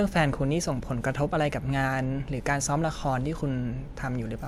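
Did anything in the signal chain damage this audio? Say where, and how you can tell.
No, nothing in the signal chain damaged this audio.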